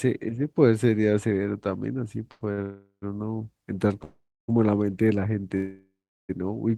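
Short stalls from a late packet come first, at 2.31 to 2.43 s and again at 2.53 to 2.60 s. In each, the next packet of speech hadn't arrived when it was due, so the jitter buffer ran dry and the receiver held the last sound in place until the packet turned up, for 92 ms and then 49 ms. Nothing is lost; the speech resumes where it stopped, but a sound is drawn out unnaturally with a faint buzz or dip.

Call audio freezes follow at 2.62 to 3.04 s, 4.04 to 4.50 s and 5.56 to 6.31 s, likely caused by packets held up in the network long enough to empty the buffer. Each time the last sound is stretched into a fading buzz or hiss that decays to silence, about 100 ms, 310 ms and 370 ms of it respectively, before speech picks up where it stopped. The gaps add 404 ms, 442 ms and 727 ms of delay, with nothing missing.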